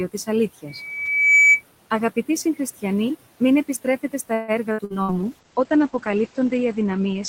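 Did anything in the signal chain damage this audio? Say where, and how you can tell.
Yes. Throughout the clip, the background pumps: it drops by about 16 dB between phrases and swells back under the speech. That is noise suppressor artifacts from call processing, which gates noise bands frame by frame. The room noise underneath sits about 20 dB below the speech.

From 0.67 to 1.63 s a single 2.3 kHz tone climbs over roughly 0.7 s into a squeal, peaking around 5 dB above the speech. This is loudspeaker feedback squeal in the analogue acoustic path: the microphone re-captured the loudspeaker, and loop gain exceeded one at that frequency.

From 4.33 to 5.13 s, just after "συγχριστιανοί μην επιστρέφετε στα", the sound turns choppy, with several holes, the longest about 150 ms. Repeated packet loss on the network is the cause. Concealment stretched earlier sound over roughly two-fifths of the span, and the remaining gaps were left empty.

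From 5.04 s to the end, the speech goes muffled and rough because the top end is cut at 8 kHz instead of reaching 20 kHz. That is a call bitrate drop at the codec stage, consistent with Opus falling from about 32 to 11 kbps.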